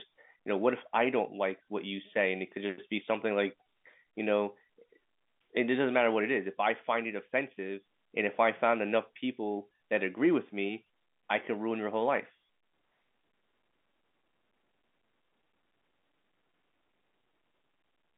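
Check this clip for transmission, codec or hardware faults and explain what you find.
No transmission, codec or hardware faults can be heard; the speech arrives as an ordinary telephone-band signal through G.711 coding, with the line passing roughly 200 Hz to 3.6 kHz and nothing above about 3.8 kHz.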